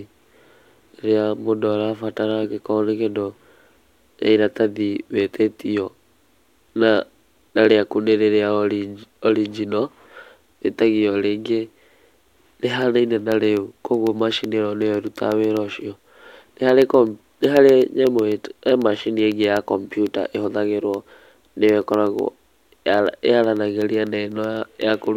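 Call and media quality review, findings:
Periodic USB or driver dropouts, 11.82 s to 25.07 s, starting just after "wĩtagio rĩngĩ". Symptom: regular ticks every 0.125 s (8 per second), around a hundred in total, audible only under signal. Probable component: USB audio path or driver. Mechanism: a recurring background task stalls the bus or driver, and each stall drops a fraction of a millisecond of samples, replaced with silence.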